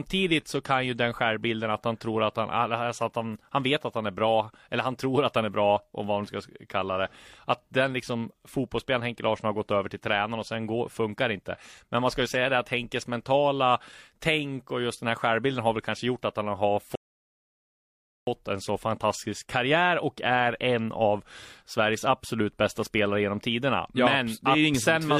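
At about 16.95 s, right after "gjort att han har", the speech just drops into silence and sits there until about 18.27 s, then picks up cleanly with "en så fantastisk karriär". That's a rebuffering stall: the player ran dry of downloaded audio and paused until more came in. Nothing's skipped or cut. It's the same speech, just held up for roughly 1.32 s of dead air mid-sentence.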